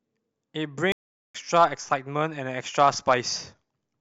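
At 0.92 s the speech cuts to silence for 0.42 s, until 1.35 s, a playback stall, likely the player starving for data or its thread being blocked.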